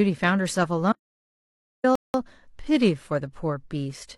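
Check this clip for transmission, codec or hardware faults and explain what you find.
Two faults affect this speech clip.

From 0.92 to 1.84 s there is an audio dropout to silence: the input was likely lost, leaving about 0.91 s of dead digital silence without room tone, and that speech is gone.

From 1.95 to 2.14 s a rebuffering stall adds 0.19 s of silence. Unlike the dropout, speech resumes exactly where it stopped, so nothing is missing.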